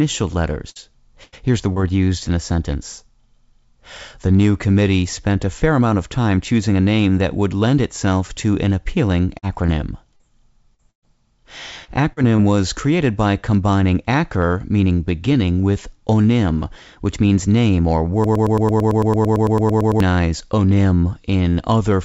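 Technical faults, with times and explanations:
0.70 s and 1.23 s, burst of packet loss: the last sound is held and fades out for about 56 ms, then 90 ms. The receiver stretches the last sound, then skips ahead past the missing audio.
1.72 s, 11.84 s, 12.13 s and 12.37 s, short concealed packet loss: brief smears of 20 to 40 ms each, where late packets were patched by extending the last sound. The last two come just before "was created by combining".
9.39–11.04 s, repeated packet loss (robotic sound): a choppy stretch in which five gaps, the longest 118 ms, are each patched and then broken again, losing about 260 ms in all.
18.24–20.00 s, broken-record loop: after "which means name or", a 112 ms fragment repeats 16 times back to back. The likely cause is a stalled stream resending its last piece while the real audio is lost.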